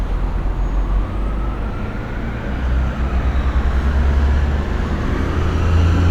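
A short recording of everyday sounds, with no technical fault to be heard anywhere in it. Nothing in the audio calls for a time or a cause to be flagged.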